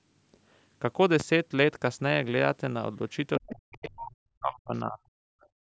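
At 1.20 to 1.23 s a single loud pop sits on top of the speech, peaking roughly 10 dB above it, with the speech continuing underneath. This sharp transient is most likely a voltage step from a plug, switch, static discharge or driver glitch.

From 3.38 to 5.17 s the speech is suppressed in double talk. Over roughly 1.5 s in total it dips and breaks up, falling by as much as about 40 dB. The likely cause is an echo canceller that could not tell the talker from loudspeaker echo and turned both down.

Within and after that stretch, the other side's voice leaks through in short scraps at 3.47 to 3.52 s and 4.05 to 4.11 s, about 15 dB below the speech. Fainter scraps follow at 4.75 to 4.80 s (about 40 dB down) and 5.41 to 5.48 s (about 35 dB down). This is likely loudspeaker playback the canceller failed to remove fully.

From 5.48 s to the end, the background is gated by the echo canceller. 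The room sound drops by about 36 dB for roughly 0.2 s because the canceller clamped the microphone down hard while the loudspeaker was active.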